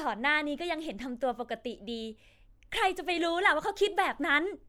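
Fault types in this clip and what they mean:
The speech signal shows no dropouts, level jumps, distortion, noise bursts or timing disturbances at any point that a listener could pick out.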